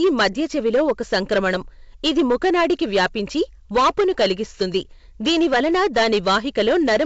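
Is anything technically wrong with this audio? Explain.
Yes. Throughout the speech, the louder syllables take on a harsh, buzzy crackle, and the peaks sound gritty rather than round. This is hard clipping: the signal was driven about 11 dB past what one stage could pass, so about 7 percent of the samples hit the ceiling and were cut flat. Those squared-off tops add harmonics high up the spectrum, which sit as fuzz across the wideband telephone band, whose upper range up to 7 kHz comes through with only a light hiss.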